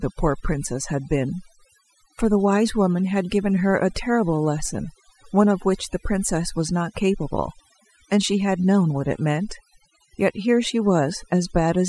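Overdone noise removal runs throughout the speech. The noise reduction was set too aggressively, pulling individual frequency bands down or out whenever they sat near its noise estimate. Quieter parts of the voice vanish with them, leaving near-silent gaps flecked with twinkling specks.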